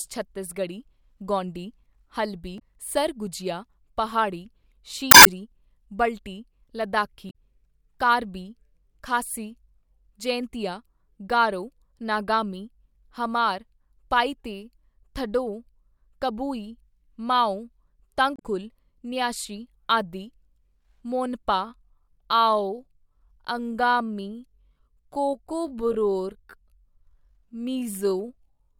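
At 2.56 to 2.62 s, 5.10 to 5.27 s, 7.27 to 7.35 s and 18.36 to 18.41 s, damaged data in the compressed stream makes the decoder misread frames and hunt for sync, giving short squawks and blips. Each shows as a broadband smear or blank slot on the spectrogram. From 21.61 s to the end, the speech slows to about 0.66 times its pace with unchanged pitch, likely a time-stretched section. The pieces repeated to fill the length make it drag, and the spectrogram shows stretched syllables.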